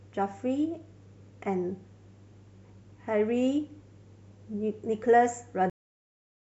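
Cut-off end at 5.70 s: this speech recording stops abruptly in the middle of a sound and falls straight to digital silence, which holds for the remaining 0.73 s or so. There is no natural decay or tail, so the final stretch of audio was never delivered. The last buffers of the recording were not written to the file or not played out before the stream closed, leaving a hard truncation instead of a finished ending.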